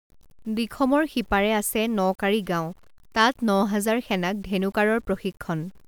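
Low bit depth without dither runs through the whole speech clip. The samples were likely truncated to very few levels, consistent with 8 bits, with no dither, so the error follows the speech as grainy distortion roughly 35 dB down, turning quiet passages gritty and sputtery.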